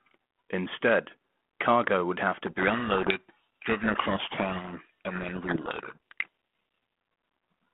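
From 2.47 to 6.28 s, a codec payload misread buries the speech in harsh distortion. The G.726 code words arrive in the wrong bit order, so the decoder mistracks the signal.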